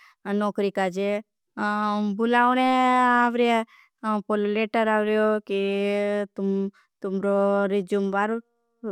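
No technical faults can be heard anywhere in this speech recording.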